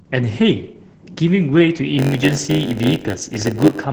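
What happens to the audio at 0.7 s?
At 0.7 s the speech is under Opus voice compression, which runs through the whole clip. The SILK linear-prediction coder caps the band at 8 kHz and codes the excitation coarsely, so the speech sounds muffled, hoarse and slightly robotic, consistent with a bitrate near 10 kbps. On a spectrogram there is a flat ceiling at 8 kHz, with smeared, blotchy harmonics that change in steps, which fits 20 ms frames.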